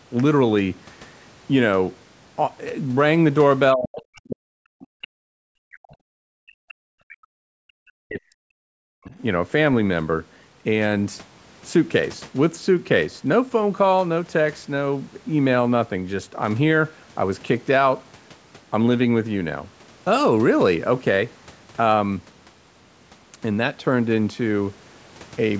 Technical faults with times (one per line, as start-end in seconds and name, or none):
3.75-7.24 speech suppressed in double talk
7.52-7.77 background gated by the echo canceller
8.05-9.14 speech suppressed in double talk